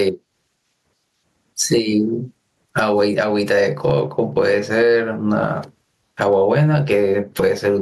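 Gain pumping runs through the whole speech recording: the gain swings by roughly 20 dB, so the sound feels squashed and breathing. The likely cause is input gain set far too high, with a fast limiter clamping each loud syllable. On a waveform the peaks sit at a similar height.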